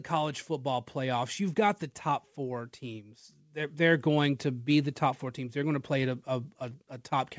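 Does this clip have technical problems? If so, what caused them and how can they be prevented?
Yes. Automatic gain rising is the problem here. The call's gain control judged the incoming level too low and pushed its gain up gradually, by about 5 dB, between 2.36 and 4.11 s. Because the control acts on the whole signal, the speech and the background noise swell together over that stretch rather than jumping, so the room seems to creep closer while the speaker's level climbs. The band ending at 8 kHz fits the wideband call path and is expected. Setting a proper fixed input level at the microphone, or capping the gain control's maximum boost, keeps it from ramping up mid-call.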